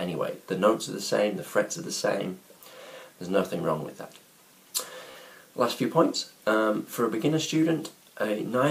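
At 1.98 to 2.01 s there's a quick Bluetooth stutter: data arrived late or went missing, so the receiver replayed its last short slice instead of going silent. It's a single repeat, about 15 ms of sound, heard as a tiny hiccup. A longer one hits at 5.11 to 5.16 s, where roughly 46 ms goes missing. That fits three dropped frames, so it's a brief buzzy stutter before the sound jumps ahead as if it had kept playing.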